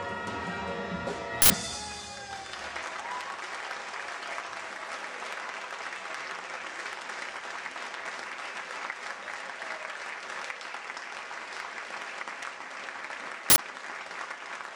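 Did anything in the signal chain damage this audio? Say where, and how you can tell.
Yes. The damage sits at the driver or buffer stage, from an uninitialised buffer played out twice. Two short bursts of harsh digital noise break in, at 1.42 to 1.5 s and again at 13.5 to 13.58 s. Each lasts 80 ms, matching one 80 ms block. A block reached the output before any audio was written into it. Whatever stale memory it held was read as samples, giving loud noise instead of sound.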